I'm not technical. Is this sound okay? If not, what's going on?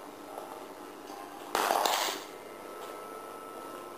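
No. Throughout the clip there is overlap-add ripple: the audio was split into short overlapping chunks and rejoined so the overlaps don't blend evenly. The loudness dips and swells about a hundred times a second, giving a rough, buzzy, robotic flutter.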